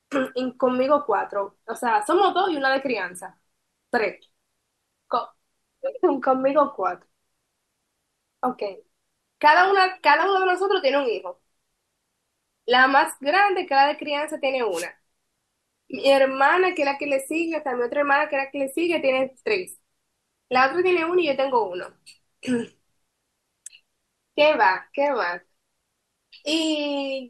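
At 14.71 s a wireless microphone noise hit lasts about 0.16 s, until 14.87 s. The FM radio link briefly faded as reflected signals cancelled, letting receiver noise rise over the speech. It is heard as a short swish of static.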